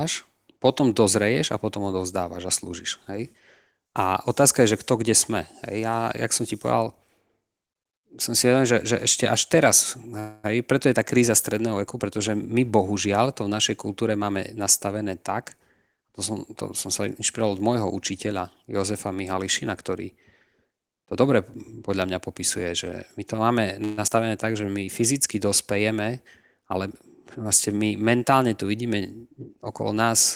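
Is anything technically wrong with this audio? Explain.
Yes, there are timing faults of four kinds.

Call audio freeze at 10.19–10.46 s and 23.84–23.99 s: the sound stretches into a fading buzz for about 240 ms and then 130 ms. The likely cause is late packets draining the jitter buffer, leaving a gap with nothing lost.

Jitter buffer speed-up at 13.89–14.64 s (109%), 20.83–21.29 s (112%) and 21.89–23.34 s (106%): the speech sounds hurried at unchanged pitch. The receiver trims pitch periods to shed excess delay, roughly 70–100 ms each time.

Skip ahead at 24.07–24.10 s: the audio jumps forward almost seamlessly. About 70 ms was dropped while later audio waited in the buffer.

Jitter buffer slow-down at 24.52–24.86 s: the sound drags at 85% speed, same pitch. The receiver repeats pitch periods, adding 59 ms to rebuild its reserve.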